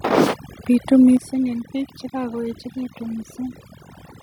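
Overdone noise removal is present throughout. The noise reducer was set too hard. It pushes frequency bands near its noise estimate down or off, taking quiet parts of the speech with them. The background drops and breaks up into twinkling specks.

At 1.17 s, voice and background drop together by about 6 dB in a single step. This is likely the microphone volume stepped down. The call software judged the input too loud and lowered the device's input volume at once.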